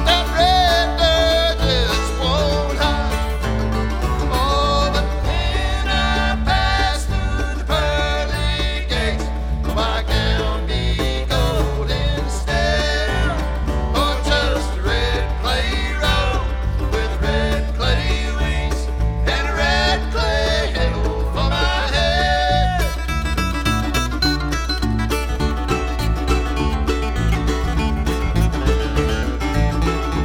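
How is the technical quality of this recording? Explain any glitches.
The recording is compromised by strong mains hum running from start to finish. A steady 60 Hz tone sits underneath everything at roughly the same level as the wanted sound, so it competes with the audio rather than lurking below it. It comes from power-line current leaking into the signal path, as through a ground loop or a nearby transformer. On a spectrogram it appears as a solid horizontal line at 60 Hz across the whole clip, and the waveform shows a regular ripple riding under the signal.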